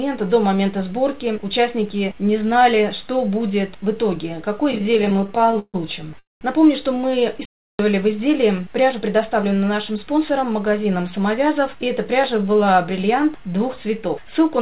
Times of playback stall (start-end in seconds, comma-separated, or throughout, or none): 7.45-7.79